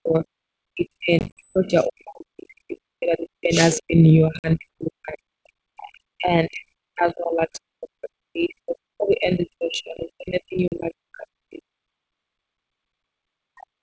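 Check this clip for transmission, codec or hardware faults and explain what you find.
Three kinds of fault are audible, all pointing to a call path with echo cancellation and ADPCM coding. The audio itself reaches up to about 8 kHz, as expected from a wideband G.722 link.

Speech suppressed in double talk occurs at 0.0–0.25 s, 0.71–5.25 s, 5.42–6.66 s and 6.87–11.82 s. The speech dips, thins out or breaks into fragments, at its deepest by around 40 dB. This is likely an echo canceller that could not separate this side's talker from the far side's loudspeaker echo while both were active, and attenuated everything.

Packet loss on an ADPCM call occurs at 1.19–1.54 s (110 ms lost, scattered over 180 ms, the longest gap 50 ms), 4.39–4.56 s (50 ms) and 10.68–10.73 s (40 ms). Each loss is an abrupt silent hole. The speech then returns with a click, a level jump or brief roughness, because the decoder's predictor and step size have drifted from the sender's and need tens of milliseconds to resync.

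Background gated by the echo canceller runs from 12.1 s to the end. The room tone drops sharply, by about 40 dB, for roughly 1.5 s. The canceller clamps the microphone while the loudspeaker is active, so the ambience vanishes instead of staying as a steady floor.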